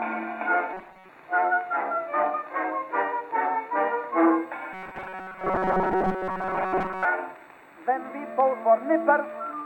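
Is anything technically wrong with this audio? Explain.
Yes. Robotic sound from repeated short buffers occurs at 0.74–1.09 s and 4.73–7.05 s. The music becomes a rigid, metallic buzz at 188 Hz. This is likely from a roughly 5 ms buffer being replayed, with most of the real audio skipped.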